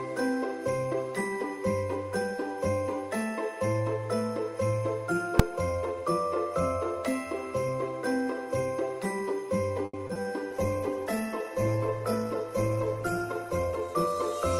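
At 5.39 s there is a single loud bang. This is invalid numbers at full scale. A calculation produced infinite or invalid values, and the output jumped to its largest positive or negative level. The stretch is only about 2.9 ms long, which fits one 128-sample processing block. Because the block is so short, the loud edges at its start and end merge. You hear one sharp crack rather than two pops with silence between them.

From 9.85 s to 10.26 s the sound turns choppy and robotic. This is repeated packet loss. Four holes fall close together in this span. The receiver patched them by stretching the last good sound forward. About 140 ms was filled that way, roughly a third of the stretch. Another 60 ms is simply missing. The longest hole is 80 ms. The repeated patches give a broken texture.

At 10.51 s a call bitrate drop begins, and it lasts to the end of the clip. The bandwidth estimate fell, and the encoder was told to spend far fewer bits. 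The sound points to a fall from 48 kbps to 12 kbps. The low point holds for about 2.78 s. At that rate the coding gets coarse and the top end is cut. The audio goes rough, watery and muffled, and it does not recover before the clip ends.

From 13.36 s to 14.07 s the jitter buffer speed-up is audible. Too much audio had built up in the buffer. To cut the delay, the receiver removed many short pieces, each one or a few pitch periods long. Altogether about a tenth of a second was taken out. Playback runs at about 111% speed with no change in pitch. The sound feels hurried and rushed. This overlaps the low-bitrate stretch, so the two faults are heard together.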